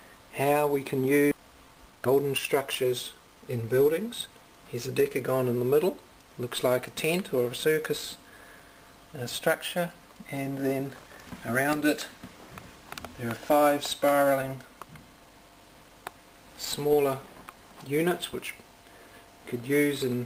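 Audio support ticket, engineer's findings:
Skip ahead at 1.31–1.33 s. About a second of audio is missing, with no fill. Audio was dropped while later audio was waiting, and both sides were joined directly.

Jitter buffer speed-up from 1.37 to 3.63 s. Audio runs at 117% speed with unchanged pitch and sounds hurried. Short pitch-period pieces were cut, roughly 400 ms in all, to reduce excess buffer delay.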